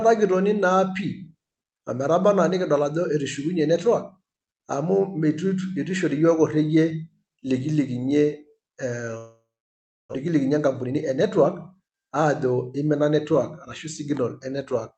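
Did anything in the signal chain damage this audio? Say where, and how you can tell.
Yes. From 9.17 to 10.15 s the speech smears into a fading buzz, then about 0.66 s of silence, and resumes with 0.6 s missing: likely a long network dropout.

Right after, from 10.25 to 13.31 s, a jitter buffer speed-up plays the speech at 109% and same pitch, trimming pitch periods to shed roughly a third of a second of backlog.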